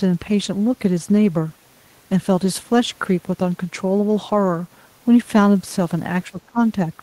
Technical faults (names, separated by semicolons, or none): speech suppressed in double talk